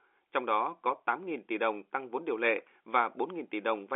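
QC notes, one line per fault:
No faults heard in this speech clip. The G.711 telephone coding sounds as a line band of roughly 300 Hz to 3.5 kHz, with at most a faint grain that follows the level, which fits a 64 kbps A-law telephone path.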